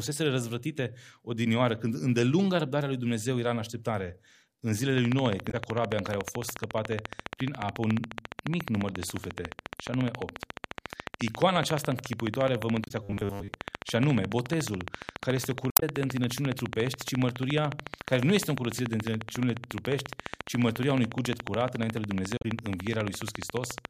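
From 4.98 s to the end at about 23.86 s, a train of clicks runs under the speech: sharp, near-identical pulses at a steady 14.2 per second, roughly 300 in all. They peak around 15 dB above the speech and are heard in the pauses too. Their even spacing and constant shape point to a periodic injection from outside the signal, likely interference from nearby equipment or a faulty connection or power supply.

At 5.47 to 5.54 s comes the first sign of damaged data in a compressed stream, a short glitch lasting about 70 ms. It recurs at 12.84 to 12.91 s, 15.69 to 15.83 s and 22.37 to 22.45 s. Each time, corrupted bytes break the frames, the decoder loses sync and searches for the next valid header. The result is a brief squawk or blip, usually with a jump forward in the speech.

From 13.03 to 13.48 s, the speech turns into robotic sound from repeated short buffers. It becomes a rigid, metallic buzz at a fixed 100 Hz that only loosely follows the speech's contour. 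That buzz frequency fits a buffer of about 10 ms being replayed. Most of the span is repeated material, with the real audio between repeats skipped, likely because new buffers arrived too late to play out in time.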